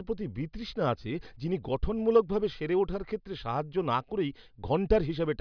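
Nothing in this bit of speech stands out as a technical fault.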